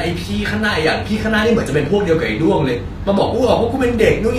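From start to finish the speech has a bright but gritty, metallic top, with s sounds turning lispy and nothing above 14.9 kHz. This is likely HE-AAC compression, rebuilding the treble from copied lower bands, and the damage fits a low bitrate near 24 kbps.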